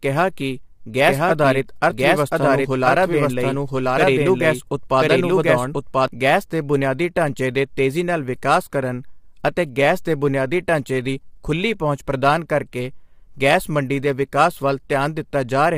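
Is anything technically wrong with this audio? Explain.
Yes. Throughout, the speech sounds rough and grainy, with noise between harmonics and a synthetic top band, likely from low-delay AAC compression at a bitrate around 32 kbps, whose short frames resolve pitch poorly.

From 1.06 to 6.08 s, just before "ਗੈਸ ਦੇ ਬੁਨਿਆਦੀ ਢਾਂਚੇ", a doubled audio track trails about a second behind at roughly equal loudness, likely a second capture path. Unlike an echo, it has no decay or room colour and starts and stops abruptly.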